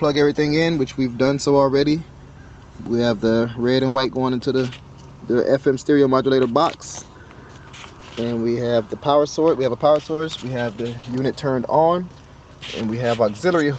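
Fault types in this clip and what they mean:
Burst of packet loss: A run of packets arrived too late or not at all, so the receiver had to invent about 80 ms of audio from 3.87 to 3.97 s. It extended the last sound while steadily lowering its level, which turns a voiced sound into a held buzz or an unvoiced one into a fading hiss. About 80 ms of the real audio is gone, and playback picks up again past the gap.
Short concealed packet loss: On three occasions a few hundredths of a second of the call failed to reach the decoder in time: about 20 ms at 8.0 s and about 40 ms each at 10.13 and 10.99 s. The receiver filled each hole by carrying the previous sound forward, pitched if voiced and as shaped noise if not, then blended back into the real signal, leaving a brief smear or wobble.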